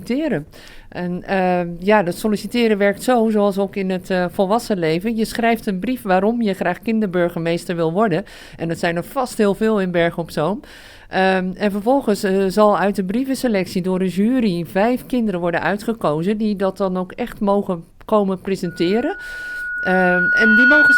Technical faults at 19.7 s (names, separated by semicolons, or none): loudspeaker feedback squeal